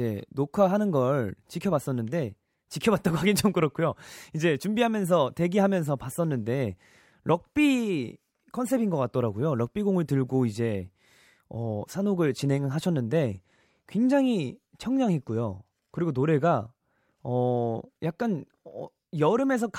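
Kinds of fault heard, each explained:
No technical fault can be heard in the speech; the signal stays continuous and stable throughout.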